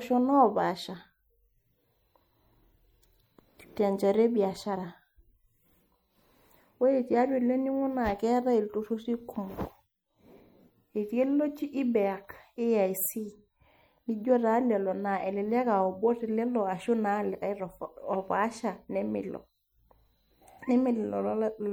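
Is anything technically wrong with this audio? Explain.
Yes. Throughout the speech there is plainly audible MP3 compression, likely from a low bitrate around 64 kbps: starved frequency lines flicker between frames, giving watery swirl and chirpy sibilants rather than a steady, static dullness.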